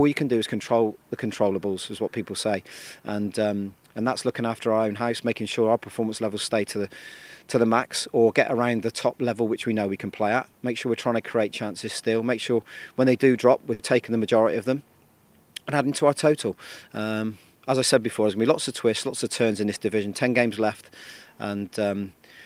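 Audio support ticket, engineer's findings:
Short stall from a late packet, 13.73–13.81 s: sound held about 80 ms with faint buzz or dip, 60 ms of it stretched fill, then resumes at the same point. Jitter buffer underrun; nothing lost, unlike a packet-loss gap, so delay grows by 60 ms.

Jitter buffer speed-up, 15.79–17.01 s: audio slightly faster, running at 104% with pitch unchanged, roughly 70 ms trimmed in total. Receiver cutting pitch-period slices to drain excess buffered delay; constant pitch separates it from a clock or resampling fault.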